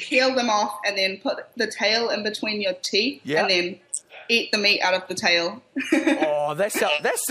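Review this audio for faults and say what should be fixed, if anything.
Dropped samples, at 2.85 s and 6.63 s: each is a single sharp click, a thin vertical line across the spectrum, most likely where a handful of samples, a fraction of a millisecond, went missing and the waveform jumped abruptly to a later value. To prevent it, give the capture or playback path enough buffer headroom that it never skips samples under load.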